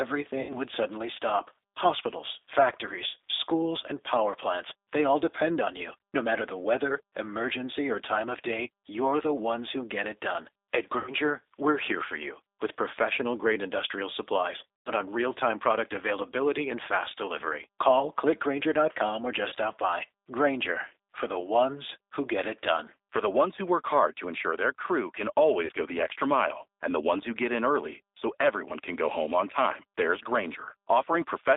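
Throughout the speech there is a thin, slightly rough and synthetic quality, with nothing below about 300 Hz or above about 3.7 kHz. That is the G.729 codec at 8 kbit/s, rebuilding the speech from a coarse vocal tract model and a sparse pulse excitation.

At 0.41 to 0.56 s, 10.98 to 11.14 s, 14.80 to 14.92 s, 19.48 to 19.54 s and 25.65 to 25.72 s, the sound smears into a fading buzzy tone or coloured noise and stays weak briefly afterwards. This is VoIP packet loss concealed by the speech codec, covering gaps of roughly 40 to 100 ms.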